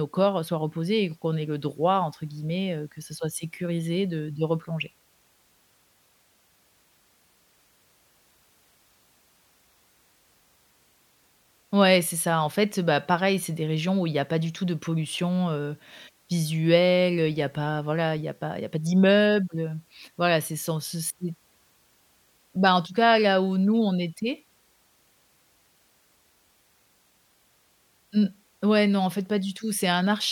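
Listening to this speech recording, nothing technically amiss stood out at any point.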